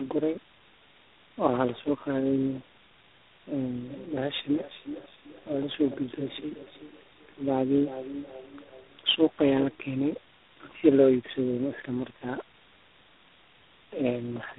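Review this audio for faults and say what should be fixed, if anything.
Tandem speech coding throughout: rough, muffled, warbly speech with nothing above 3.8 kHz, consistent with roughly four speech codecs re-encoding each other's output. Prevent it by passing the coded stream through transparently instead of transcoding at each link.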